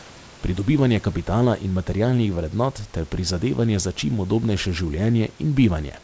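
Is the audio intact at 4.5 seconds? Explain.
Yes, the speech at 4.5 s is intact, with no dropout, glitch or other fault at that moment.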